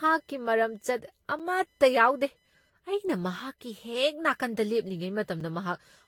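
From the first moment to the end there's computer activity noise: a faint buzzy whine pulsing at around 1 kHz, sitting roughly 45 dB below the speech. That's processor or peripheral load currents leaking into the audio ground, so it follows the machine, not the talker.

Running throughout as well, the speech sounds swirly and hollow, with smeared consonant attacks and nothing above 19.5 kHz. That's more damage than a single encode at around 70 kbit/s would do. The likely cause is generation loss from about seven rounds of Vorbis re-encoding, each pass stacking fresh quantisation noise.

At 1.39 s and again at 5.40 s there's a gap between chunks: a short hole of about 7 ms. The two fall 4 s apart, which fits audio delivered in 2-second chunks with a little silence left at some joins.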